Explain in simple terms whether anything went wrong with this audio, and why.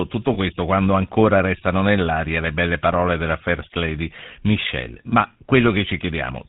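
GSM full-rate codec, throughout the clip: the whole recording passed through the original GSM mobile-phone speech codec, and the damage is plainly audible. Instead of sending the sound itself, the codec sends a rough model of the throat and mouth and drives it with evenly spaced pulses, discarding much of the fine detail. Everything above 4 kHz is cut away, so the speech sounds muffled, buzzy and gravelly, like an old phone call.

Lost GSM frames, at 0.34 to 0.37 s and again at 5.10 to 5.13 s: each time, one 20-millisecond chunk of the coded signal never arrived intact. The decoder filled the gap by repeating the previous good chunk's settings. Because each loss is so short, this comes across as a brief rough, metallic ring or blip, with no drop into silence.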